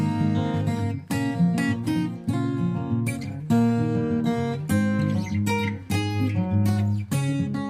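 Nothing in the signal points to a technical fault at any point in the recording.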